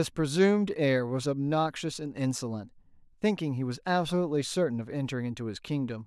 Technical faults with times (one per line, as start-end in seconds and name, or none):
none